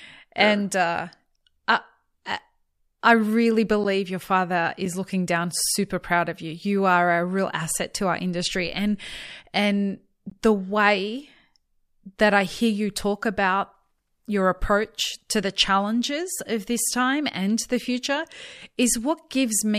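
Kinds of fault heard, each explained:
Block of digital silence: the audio path twice failed to deliver samples in time, and the missing stretch was filled with zeros. The speech drops abruptly to dead silence and back without any fade, heard as a tick near 3.84 s (about 12 ms, which fits a 512-sample buffer), with another gap near 10.31 s (about 17 ms).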